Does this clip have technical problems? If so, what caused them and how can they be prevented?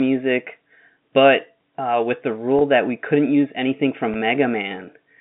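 Yes. Two brief packet-loss gaps with pitch repetition occur, at 2.59 to 2.61 s (20 ms lost) and at 4.14 s (10 ms), over an otherwise clean G.711 telephone band. Rather than dropping to silence or clicking, the receiver repeats the last pitch period, so each gap sounds like a slightly held, buzzy sustain, which fits 10 ms packets. A jitter buffer and forward error correction on the network path would prevent these losses.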